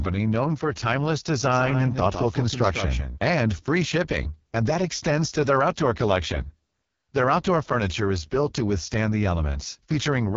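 Throughout, the speech passes through the AMR wideband (HD Voice) codec at its lowest rates, which fits the 6.6 kbit/s mode. The vocal tract model cannot track the voice closely there, so it sounds rough and raspy, with nothing above 7.3 kHz.

From 1.52 s, after "known for timeless", to 3.18 s, before "and free shipping and", a doubled audio track appears. A second capture path was likely running late. A full-band copy trails around 150 ms behind, roughly 10 dB quieter, with no room colour, and it starts and stops abruptly.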